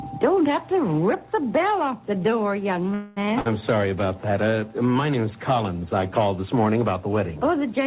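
At 2.94 s the sound stalls until 3.26 s in a call audio freeze. For roughly 0.22 s the receiver stretches the last fragment into a buzz or hiss that fades, then the audio picks up exactly where it stopped, so nothing is lost but everything after runs about 0.22 s late. The likely cause is packets held up in transit, draining the jitter buffer. On a spectrogram the final spectrum smears sideways as flat, dimming bands, all below the 4 kHz ceiling of the narrowband G.711 path; the waveform shows a repetitive, shrinking pattern.

Shortly after, from 3.40 to 3.47 s, a burst of packet loss occurs. About 53 ms is filled with a brief held sound that decays, and then the sound resumes roughly 60 ms further on, so a short stretch is missing and the continuation jumps forward rather than flowing on. A waveform shows a small block of repeated, tapering cycles followed by an abrupt change in shape, and a spectrogram shows a brief smeared patch with a hard edge where fresh audio returns.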